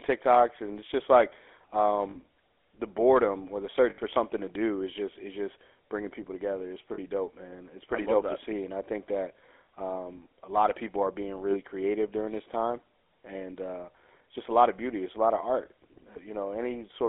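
The whole clip carries the GSM full-rate codec sound. The speech is confined to a line band of about 300 Hz to 3.5 kHz. It has a buzzy, gravelly roughness, plainly audible. The codec rebuilds the voice from sparse pulses, which fits a 13 kbps full-rate coder.

Lost GSM frames occur at 2.1 s, 3.9 s, 6.94 s and 11.5 s. They last 40, 80, 40 and 20 ms. Each gap is filled by repeating the last good frame. The result is a brief metallic ring.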